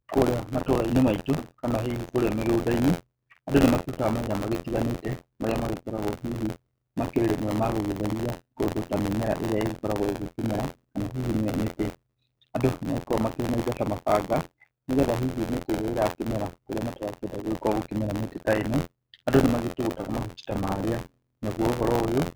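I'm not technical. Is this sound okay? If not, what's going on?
No. Buffer tearing runs from start to finish: a robotic buzz, about 86 times per second, while speech plays. Tiny slices of slightly older sound get spliced in.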